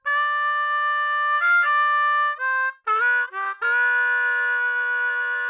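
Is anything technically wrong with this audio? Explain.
No, nothing technically wrong here.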